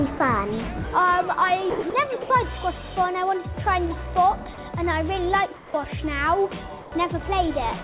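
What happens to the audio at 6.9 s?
Comfort noise in place of the background fills 6.82 to 6.92 s. For those 100 ms, the sender likely paused transmission during a detected silence and the receiver substituted synthetic noise. The real background, about 19 dB below the loud parts and band-limited at 4 kHz, turns flat, featureless and about 2 dB quieter.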